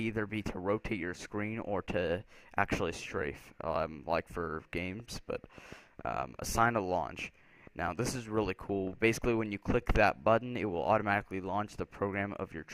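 From 5.00 to 9.25 s, a train of clicks pops at an uneven 4.7 per second, likely from interference or a faulty connection or supply; waveform spikes, spectrogram vertical lines.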